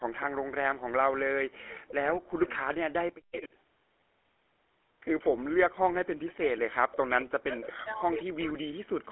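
Throughout, the GSM full-rate codec gives the speech a buzzy, gravelly roughness and removes everything above 3.8 kHz. This is coarse pulse-driven coding, not simple band-limiting.

From 0.76 to 3.5 s, the speech dips deeply, by about 40 dB, and breaks up in pieces for around two seconds in total. This is likely speech suppressed in double talk. Unlike a network dropout, the level pumps down and back rather than stopping dead.

From 3.32 to 3.38 s, a short scrap of the voice returns 227 ms late at about 15 dB below the speech. This echo leak is likely a loudspeaker echo the canceller missed. It differs from room reverberation because it is a distinct delayed copy.

From 6.34 to 9.09 s, the same double-talk suppression returns, likely from the same cause. The voice again sinks by up to about 40 dB and is chopped for roughly two seconds.

During that stretch, from 7.2 to 8.24 s, a longer echo leak trails the voice by the same 227 ms, about 15 dB down, likely from the same cause. 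A final scrap at 9.07 to 9.11 s comes through at about 20 dB below the speech. The fixed 227 ms delay marks both as returned echo rather than reverberation.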